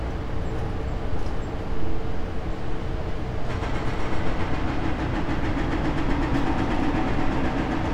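No faults detected anywhere in the sound.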